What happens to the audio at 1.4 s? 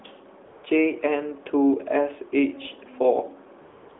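Nothing goes wrong at 1.4 s; the speech there carries only the band-limited sound of the AMR narrowband mobile codec it passes through, with no fault at that point.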